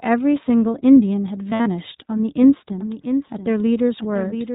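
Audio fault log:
Throughout: iLBC codec. The speech sounds plainly rough and slightly synthetic, with nothing above 4 kHz, from a narrowband codec at 15.2 kbps coding 20 ms frames.
1.50–1.68 s: lost iLBC frames. A held, buzzy vowel-like smear breaks up the speech for about 120 ms as the decoder repeats the last pitch cycle over missing packets, with the longest dropout around 70 ms.
2.81 s to end: doubled audio track. An abrupt, dry second copy about 10 dB quieter trails roughly 0.7 s behind, likely a second capture path or misaligned edit mixing the audio in twice.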